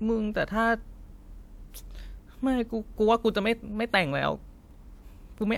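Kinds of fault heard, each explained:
Nothing stood out as a fault on listening to this speech recording.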